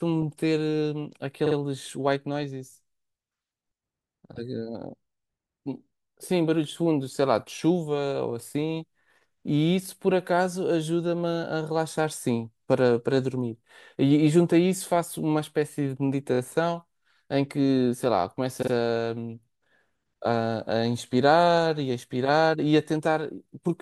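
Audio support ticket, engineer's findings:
Repeated frames in the speech at 1.45–1.55 s, 16.33–16.38 s and 18.61–18.71 s. Stutter. A 48 ms block, then 24 ms, then 48 ms, each replayed twice, fitting frames of 24 ms. Encoder/transport re-sent frames, adding 96 ms, 48 ms and 96 ms.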